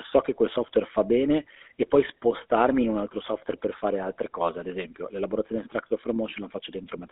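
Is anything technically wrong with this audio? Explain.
Yes, there's GSM full-rate codec damage throughout. The speech sits in a narrow band, roughly 250 Hz to 3.6 kHz. Pulse-driven vocal-tract modelling gives it a plainly buzzy, gravelly roughness, which fits a 13 kbps stream.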